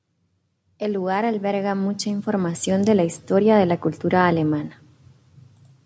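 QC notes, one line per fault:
0.64–3.27 s: automatic gain rising. The control lifts a quiet input by about 11 dB before "de la cultura alemana", so voice and background swell together gradually rather than jumping.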